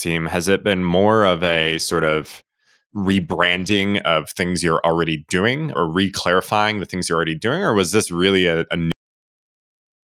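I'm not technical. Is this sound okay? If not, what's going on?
No. From 1.45 to 3.89 s, right after "it been more of", there is a call bitrate drop. The connection briefly told the sender to use far fewer bits. The speech turns rough and muffled, then clears up by "of things you're already".

At 8.92 s, just after "this really a a", there is a cut-off end. The final stretch of audio was never saved or played. The speech stops mid-sound and drops straight into dead silence, with no natural fade.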